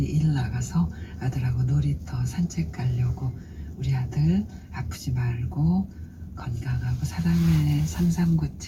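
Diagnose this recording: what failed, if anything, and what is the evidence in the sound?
Nothing failed; no faults heard.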